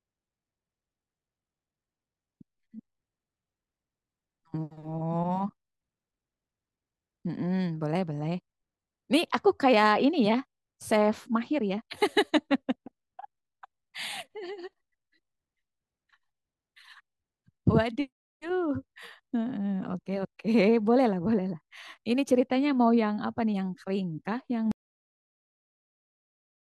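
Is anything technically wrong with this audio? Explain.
Yes, there's an audio dropout to silence right at the end. At 24.72 s the speech stops mid-flow and the last two seconds or so, through to the end of the clip, are dead digital silence, with not even room tone underneath. That points to the input going away, likely a disconnected device, a dropped link or a mute switched on, while the recorder kept writing silence. Whatever was said in that tail is simply gone.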